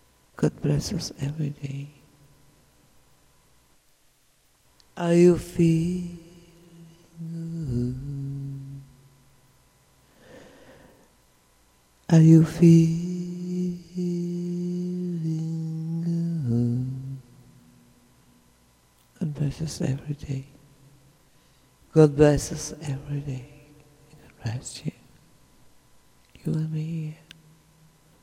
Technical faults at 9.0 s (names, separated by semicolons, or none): none